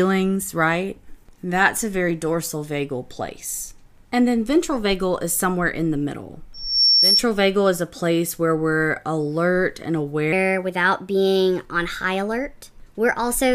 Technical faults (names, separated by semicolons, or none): loudspeaker feedback squeal; section at the wrong speed